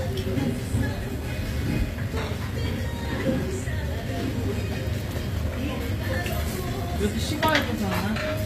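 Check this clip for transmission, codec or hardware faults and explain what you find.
One codec fault runs through the whole clip: HE-AAC compression. The treble above the coded band sounds gritty and metallic, with nothing above 15.4 kHz. This is likely spectral band replication copying lower bands upward, consistent with HE-AAC v2 at around 24 kbps. Unlike a plain low-pass, the top is present but misaligned harmonically.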